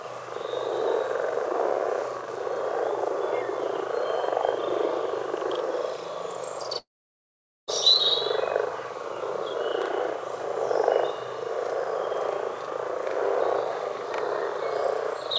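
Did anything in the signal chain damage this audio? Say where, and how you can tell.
Yes. Throughout, the sound is doubled: a second copy arrives about 40 ms after the first at equal level, a channel delay (doubling). This happens at the driver or buffer stage, where one channel ran a long buffer behind the other before the two were summed to mono. Because the copy sits at the same level and does not decay or repeat, it reads as a mistimed channel rather than room reflections or a feedback echo.

From 6.78 to 7.69 s, about 0.9 s of audio is gone, most likely a long network dropout in the call path. The last sound carries on as a fading buzz or hiss, then gives way to silence or a low steady noise until the sound resumes with that stretch missing rather than delayed. A brief packet-loss glitch would be concealed almost invisibly, and a storage or playback fault would leave a hard cut, not this fading continuation. 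The band stops at 8 kHz, consistent with the G.722 call codec working as expected.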